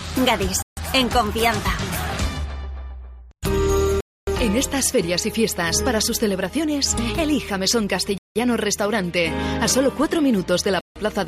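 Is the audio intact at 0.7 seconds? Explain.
No. A Bluetooth stall runs from 0.62 to 0.77 s, so 0.7 s falls inside it. The sound drops to dead silence for about 150 ms and then resumes. The likely cause is radio interference delaying packets on the wireless link, so the headphones' buffer emptied and playback had to wait for the retransmitted audio to arrive before continuing. It is a clean gap in the sound rather than distortion or noise.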